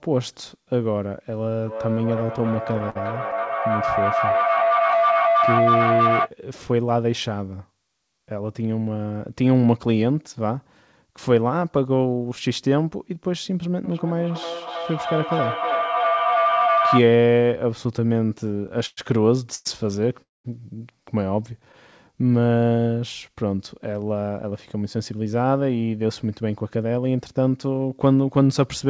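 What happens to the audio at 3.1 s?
At 3.1 s two faults overlap. A feedback howl runs from 1.66 to 6.33 s. A second device in the same room feeds its loudspeaker back into the microphone, and each trip round the loop adds level. The sound narrows to a tone near 700 Hz that pulses roughly every 300 ms and peaks about 1 dB above the speech.

Over the same moment there is repeated stalling (stutter) from 2.20 to 3.34 s. Packets arrived late, so the jitter buffer ran dry ten times, and the receiver stretched the last sound through each wait, the longest being 54 ms. About 146 ms was filled this way, roughly 13% of that span. Nothing is missing, but the audio drags and stutters.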